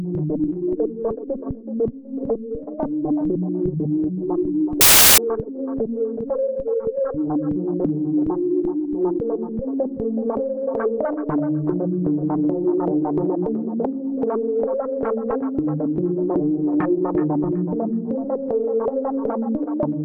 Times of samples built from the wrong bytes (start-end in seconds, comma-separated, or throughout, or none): 4.81-5.18